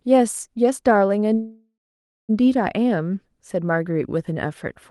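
Speech carried over a call path whose audio tops out near 12 kHz. A call audio freeze runs from 1.33 to 2.31 s. The sound smears into a fading buzz, then about 0.55 s of silence, before resuming with nothing lost. This is likely a jitter buffer running empty while packets were delayed.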